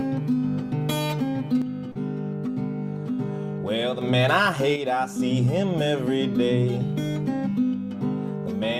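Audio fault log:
1.62–4.01 s, 4.76–5.20 s and 7.74 s to the end, one channel drops out: the level falls abruptly by about 6 dB and any sound carried only in the lost side vanishes. This is likely a lost stereo channel, so the mono sum keeps only half of the shared content.
1.91–1.98 s, short concealed packet loss: about 40 ms never arrived in time, and the receiver filled 38 ms by extending the preceding sound before blending back. The patch is heard as a brief smear or wobble inside the first dropout.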